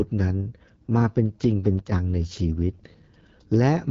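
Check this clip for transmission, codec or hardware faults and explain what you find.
Two faults are audible: wideband codec damage across the whole clip, and one brief sudden gain jump.

The AMR wideband (HD Voice) codec affects the speech from start to finish. It models the voice with pulses through a vocal tract filter and codes real detail only up to 6.4 kHz. Above that it adds shaped noise, and nothing is present above 7.5 kHz. The damage is plainly audible. The speech sounds rough and raspy, which points to one of the lowest rates, around 8.85 kbit/s.

The sudden gain jump runs from 1.79 s to 1.92 s. For about 0.13 s the level drops by about 8 dB and then returns. The speech and the background noise fall together, so this is not the talker getting quieter. The change is instant, with no ramp. That likely comes from a gain setting or bit shift applied between one sample and the next. 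The step edges can click.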